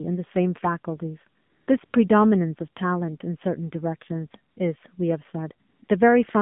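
From the first moment the speech carries the AMR narrowband mobile codec. The band runs only from about 150 Hz to 3.6 kHz, so the highs are gone and the voice sounds thin. The coding damage is plainly audible. The voice is rebuilt from a vocal-tract model driven by sparse pulses, which makes it buzzy and synthetic. That level of damage fits a low mode near 7.4 kbps.

AMR comfort noise then appears five times: 1.42 to 1.68 s, 1.86 to 1.94 s, 4.52 to 4.56 s, 5.68 to 5.82 s, and 5.84 to 5.88 s. The longest lasts 260 ms and the shortest 40 ms. In each span the phone judged the talker silent and stopped sending speech frames. The receiver filled the gap with synthetic noise. The real background drops out, and a smooth, steady hiss switches in and out around the speech.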